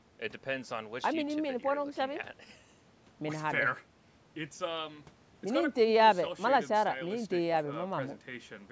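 No technical faults are audible.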